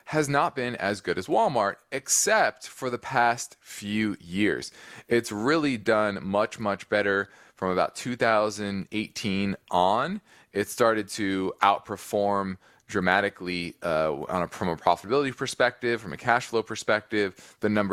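No technical faults can be heard anywhere in the speech recording; the signal stays steady and continuous throughout.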